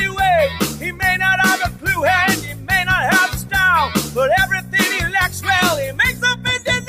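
A noise suppressor meant for speech is applied to this sound, and it pumps and thins as held content swings down by roughly 10 dB; the waveform envelope visibly breathes. Sound is cut by the noise suppressor at 0.49–1.02, 1.69–1.87, 2.37–2.71, 3.34–3.52, 5.28–5.47 and 5.9–6.46 s, dipping about 8 to 10 dB, seen as darkened, shortened sustains and tails on a spectrogram.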